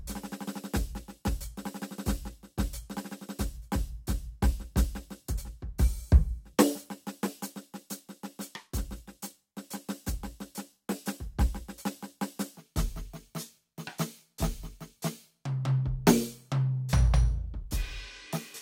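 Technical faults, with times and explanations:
12.59–18.62 s, section at the wrong speed: from 12.59 s to the end the music runs at 0.81 times its proper speed. Tempo and pitch drop together, about four semitones lower, so everything turns deep and sluggish. The likely cause is this stretch being played against a mismatched clock.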